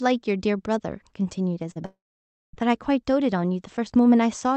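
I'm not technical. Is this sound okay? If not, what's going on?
No. Short concealed packet loss at 1.71 to 1.77 s: a tiny piece of the call arrived too late, so the receiver filled the gap by stretching the previous sound into a brief smear.

Long network dropout from 1.85 to 2.55 s: the sound trails off into about half a second of silence, then resumes with that stretch missing, likely because the connection stopped delivering audio.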